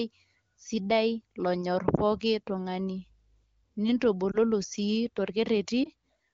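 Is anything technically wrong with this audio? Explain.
Yes. At 1.96, 4.31 and 5.84 s the speech briefly dips and warbles, each lasting roughly 46 to 64 ms, with the voice returning rough for a moment. These are lost AMR speech frames: a frame failed its checksum after radio errors, so the decoder filled the gap by reusing the last good pitch and vocal tract settings at reduced gain. Each disturbance fits a single lost 20 ms frame, too short to fade to silence, all heard within the clear-sounding AMR wideband speech.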